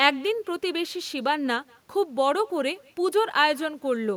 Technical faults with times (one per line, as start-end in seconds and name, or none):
0.00-4.17 echo with no canceller